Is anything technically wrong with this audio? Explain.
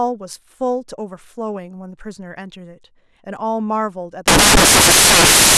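Yes. From 4.28 s to the end of the clip at 5.58 s, the speech gives way to samples built from the wrong bytes. The decoder is combining each sample's bytes incorrectly, through an offset of one byte, a swapped byte order or a misread alignment, so the rapidly fluctuating low-order bits end up as the most significant part of every value. What should be speech comes out as loud, harsh broadband noise for that final stretch.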